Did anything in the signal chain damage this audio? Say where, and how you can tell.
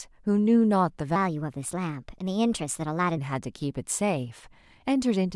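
Yes. From 1.16 to 3.18 s a section at the wrong speed runs 1.2 times fast, and the speech rises about three semitones while its pace hurries in step. The likely cause is a playback or editing stage resampling that segment against the wrong clock.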